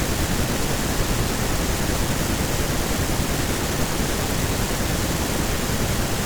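No technical faults can be heard anywhere in the recording.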